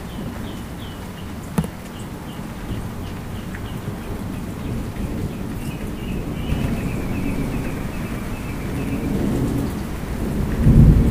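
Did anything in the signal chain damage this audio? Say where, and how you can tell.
Yes. A doubled audio track appears at 6.49 s and runs to the end: a full-band copy about as loud as the original trails it by roughly a tenth of a second, starting abruptly and without decay or room colour. This likely comes from a second, slower capture path mixing the same signal back in.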